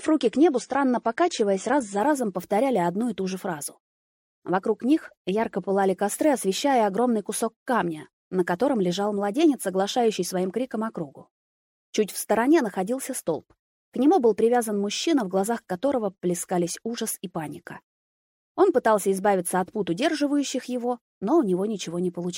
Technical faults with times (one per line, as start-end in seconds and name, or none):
0.00-2.00 adaptive stream starting at a low bitrate